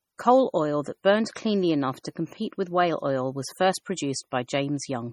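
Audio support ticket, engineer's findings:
MP3 compression artefacts, whole clip. Watery, swirly texture on speech; s sounds chirp metallically; consonant attacks smeared. Heavy damage. Likely cause: lossy MP3 encode starved of bits, fits roughly 32 kbps. Encoder zeroes weak frequency lines, which flicker on and off between frames. Top band empty above 19.9 kHz.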